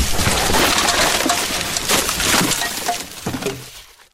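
No technical faults can be heard anywhere in the audio, and the signal stays steady and intact throughout.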